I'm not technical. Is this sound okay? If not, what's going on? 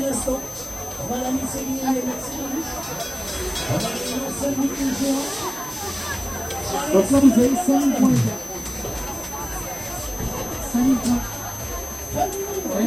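No. A thin, high whistle runs through the whole recording, wobbling slightly around 6.1 to 6.2 kHz and fairly loud next to the sound itself. It's a switching supply whistle: a power supply switching on and off in bursts at an audible rate.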